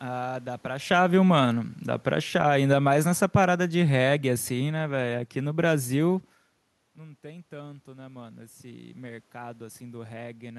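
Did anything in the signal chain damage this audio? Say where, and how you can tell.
Yes. The damage comes from automatic gain falling in the call-processing stage. Just after a change in the talker's position around 0.5 s, the level sinks by about 5 dB between 0.76 and 1.12 s, then by about 10 dB more slowly from 2.04 to 6.32 s. The room noise drops along with the speech, which points to a gain stage rather than a change in distance. The AGC judged the input too loud, or its background noise too strong, and pulled its gain down.

Automatic gain rising, also in call processing, follows. Around 6.5 s the talker moves, and the input drops by about 18 dB. From 6.96 to 10.54 s the AGC climbs back by about 6 dB. Speech and room noise swell together over more than three seconds, which is how you can tell the processor is raising its gain toward a target level, not the talker moving back in.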